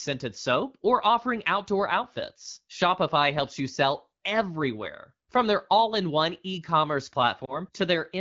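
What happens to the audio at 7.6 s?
Just after "in one e commerce", a lost AMR speech frame disturbs 7.45 to 7.59 s. The decoder reused the previous 20 ms frame's settings at falling gain, giving a brief dip or warble. The waveform envelope sags, and a spectrogram shows smeared, repeated harmonics fading and returning.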